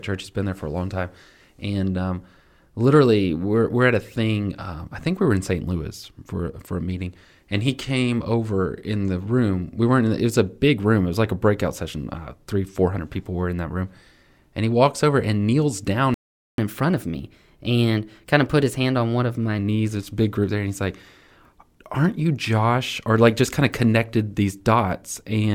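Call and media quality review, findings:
Playback stall, 16.14 to 16.58 s: speech just drops out for about 440 ms, then resumes. Likely the player's buffer ran dry or its thread got blocked, so output went silent until data arrived again.

Catch-up at higher speed, 16.58 to 19.58 s: right after the gap, speech runs 1.1x fast and pitched up about a semitone and a half for 3 s. The player's resampling through its backlog to win back lost time.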